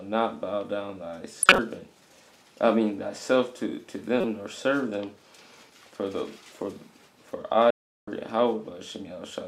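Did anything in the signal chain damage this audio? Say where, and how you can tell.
Yes, at the codec. Corrupt frames were decoded at 1.43 to 1.59 s and 4.21 to 4.25 s. Short glitches show misread frame data.

Playback stall from 7.70 to 8.08 s. The sound cuts out for about 0.37 s, then resumes. The player likely ran short of data.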